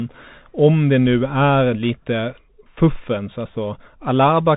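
From start to end, the speech carries Bluetooth CVSD headset codec damage. Nothing passes above about 3.8 kHz. Each one-bit step only moves the signal up or down, so sharp peaks outrun it and distort. S sounds turn scratchy over a granular hiss, which fits a 64 kbps CVSD link.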